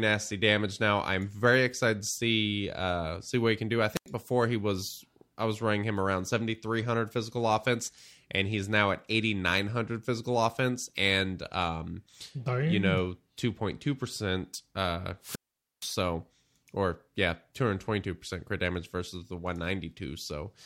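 At 3.95 s, after "he can do I", a wireless microphone squelch dropout cuts the speech for about 89 ms. At 15.21 s, after "percent uh", a longer one mutes about 470 ms. Each time the radio signal faded and the receiver's squelch muted the output.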